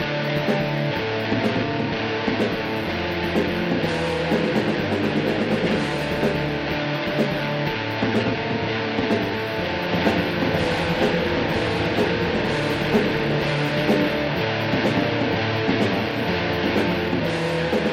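A doubled audio track runs from 9.89 s to 17.09 s: a second, full-band copy of the sound trails the original by around a second, somewhat quieter, about 5 dB down. It carries no reverberant tail or room colouring, and it cuts in and out abruptly at those boundaries. The likely cause is the same signal reaching the mix twice, once directly and once through a slower capture path, leaving two copies out of step.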